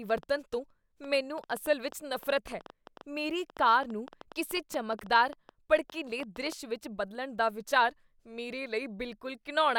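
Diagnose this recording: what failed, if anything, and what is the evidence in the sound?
Train of clicks from 0.10 to 6.53 s: around fifty uneven pops at about 7.3 per second, roughly speech-level, stopping before "ਵਿੱਚ ਬਦਲਣ ਦਾ ਵਿਚਾਰ". Likely interference in the analogue wiring.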